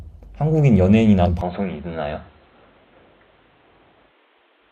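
A speech recording with two faults. At 1.22 to 1.27 s, compressed frames are skipped: about three 42.7 ms frames, roughly 150 ms of audio, are lost. From 1.41 s to the end, the sound turns dull, with nothing above 4.1 kHz and new background noise about 40 dB below the speech, with no gap and no real level change, likely because the input switched to a poorer device.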